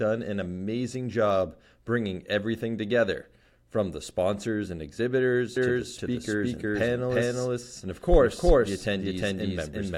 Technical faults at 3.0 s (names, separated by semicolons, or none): none